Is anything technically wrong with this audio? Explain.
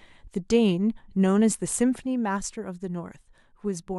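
Yes. From 2.00 s to the end of the speech, the level drops abruptly by about 6 dB and stays there, which points to one channel dropping out. The likely cause is a lost stereo channel before the mono sum, which halves the shared signal.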